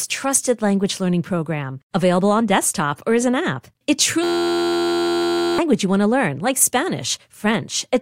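At 4.24 s the speech locks into a system hang loop that holds until 5.58 s. A single 11.61 ms slice repeats exactly, which fits a 512-sample buffer being replayed while the system stalls, and about a second and a half of real audio is lost. The rapid repetition fuses into a steady, pitched buzz at 86.1 Hz. Unlike a dropout, there is no silence, and unlike a coarse stutter, there are no separate repeats.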